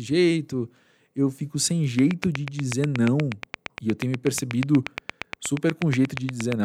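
From 1.99 s, just after "jeito eu fico sem", a train of clicks runs until 6.53 s. About forty sharp, similar pulses tick at a steady 8.4 per second. They sit about 15 dB above the speech, even in pauses. Nearby equipment interference is the likely cause.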